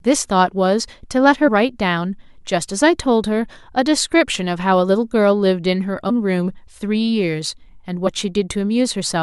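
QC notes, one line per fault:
1.47–1.49 s and 6.09–6.11 s, compressed frames skipped: the speech jumps ahead, dropping roughly 50 ms at the first point and roughly 100 ms at the second. Whole coded frames went missing or were rejected as damaged.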